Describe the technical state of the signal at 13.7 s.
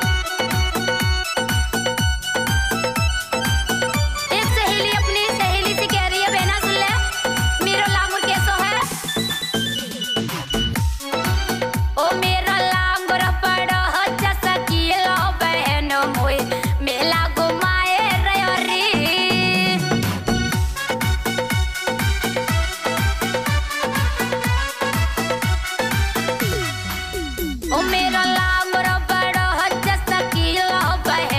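At 13.7 s the signal is intact, with no audible fault at that point.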